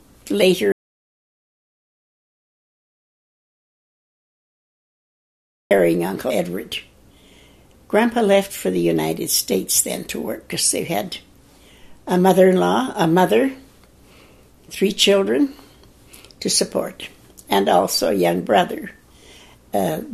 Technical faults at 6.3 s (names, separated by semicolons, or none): damaged data in a compressed stream